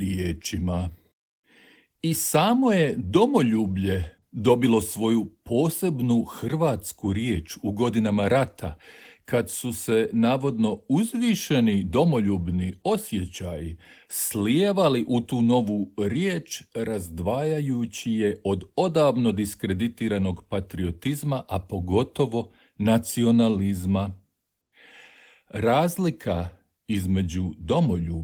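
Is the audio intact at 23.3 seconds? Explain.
Yes, the audio is intact at 23.3 seconds, with no fault at that moment.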